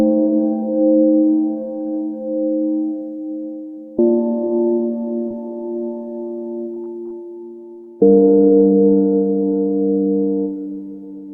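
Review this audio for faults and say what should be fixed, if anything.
At 5.28 to 5.32 s a brief smear passes over the sound. This is short concealed packet loss: 20 ms never arrived, and the decoder extrapolated the preceding audio to cover it.

From 6.74 to 7.12 s the sound turns choppy. This is repeated packet loss (robotic sound): four gaps totalling 60 ms, none longer than 20 ms, leave about 16% of that stretch concealed.

At 7.84 to 7.89 s a sound is held a little too long, with a faint dip. This is a short stall from a late packet: the jitter buffer ran dry and stretched the audio by 26 ms, with nothing lost.

To prevent these, fix the network's loss and delay spikes, and give the jitter buffer a little more depth or add forward error correction.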